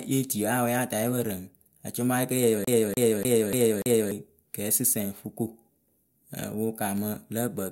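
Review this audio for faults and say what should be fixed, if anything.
From 2.64 s to 4.11 s the speech gets caught in a CD stuck on one turn. A fragment about 0.29 s long plays five times in a row. Each jump back leaves a brief mute. The result is a fast, even stutter. A scratch is throwing the laser back one track at the same point on every revolution. To prevent it, clean or resurface the disc and re-rip it in secure mode with error checking.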